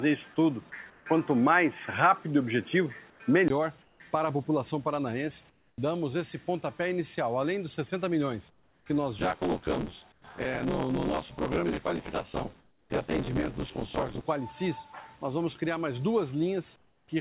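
From 0.0 to 3.50 s the audio sounds dull and boxy, with a fresh noise floor roughly 40 dB down and a level a few dB off. It opens out after a 20 ms gap at 3.50 s. This is likely an input switched to a poorer device, then back. At 0.90, 3.10, 3.82, 5.50, 8.50, 10.12, 12.60 and 16.76 s, pauses of 100 to 360 ms lose their textured background to a flat, featureless hiss about 3 to 12 dB quieter. That points to comfort noise in place of the background, likely from a sender that stops transmitting when its detector hears silence. From 9.18 to 14.21 s a rattling buzz at about 86 Hz rides on the signal. That is buffer tearing, with roughly half of each buffer replayed from about 20 ms earlier, which fits a 512-sample buffer. Beneath all of this, the call path's band ends at 4 kHz.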